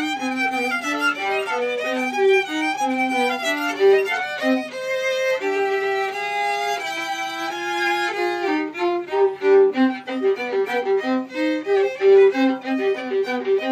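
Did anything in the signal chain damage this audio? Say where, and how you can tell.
No, I can't hear anything in this audio that points to damage at any stage of the signal chain.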